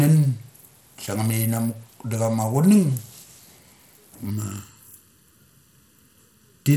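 Throughout the speech there is plainly audible codec damage, most likely from Bluetooth SBC compression. The upper bands are starved of bits, so the treble flickers in and out rather than holding steady, and a gritty quantisation noise with some aliasing sits on the sound. The degree of grit points to a low SBC bit allocation, in the region of 96 kbps. Content does reach up to about 20.2 kHz, but it is unstable there.

From 4.31 s to the end, a channel delay produces comb filtering. One channel lags the other by a fraction of a millisecond, and when the two are summed to mono the shared content cancels at evenly spaced frequencies. The first notch falls around 700 Hz, with further notches repeating at regular intervals above it. This section of speech sounds hollow and phasey compared with the first part of the clip.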